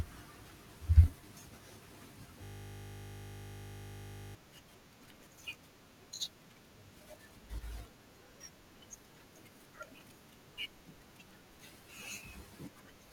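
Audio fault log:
2.44–4.35 s, system hang loop: the stalled system leaves the hardware replaying one 20 ms buffer of speech nearly a hundred times, producing a steady 50 Hz buzz.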